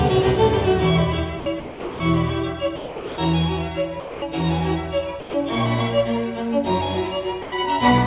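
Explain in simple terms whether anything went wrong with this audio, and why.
The music keeps cutting out briefly. It happens six times: 1.40 to 1.46 s, 1.6 to 2.0 s, 2.76 to 3.18 s, 4.00 to 4.22 s, 5.20 to 5.34 s and 7.42 to 7.52 s. Each gap lasts between 60 and 420 milliseconds. The music is replaced by steady noise or near silence. This is most likely sound dropped by the voice detector. The call's detector mistook the music for background and paused sending. The receiving end then filled the gap with comfort noise. Throughout the clip, nothing above 4 kHz comes through, which is the call line's narrow range.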